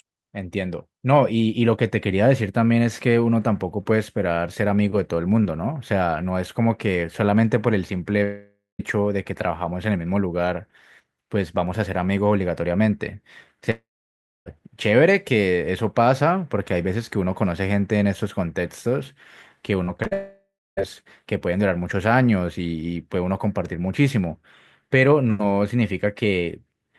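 At 8.23 to 8.81 s and 13.71 to 14.48 s, a long network dropout, likely, leaves a fading buzz and then silence (about 0.19 s, then 0.63 s) before the sound resumes with a piece missing. At 19.84 to 20.13 s, repeated packet loss gives a choppy, robotic stretch of short holes, each at most 40 ms, instead of one sustained fade. That runs straight into another likely long network dropout at 20.13 to 20.79 s, which ends in about 0.28 s of silence.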